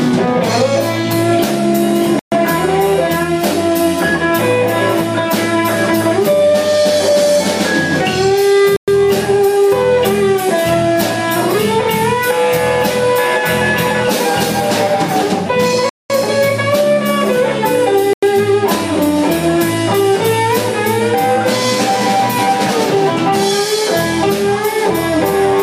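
The audio stops dead four times, at 2.19 to 2.32 s, 8.76 to 8.88 s, 15.89 to 16.10 s and 18.13 to 18.23 s, with gaps of 127, 113, 205 and 92 ms. These are likely Bluetooth stalls, where the headphone buffer ran empty while delayed packets were resent. Unlike codec packet-loss concealment, which smears or repeats sound across a gap, each of these is true silence before playback resumes.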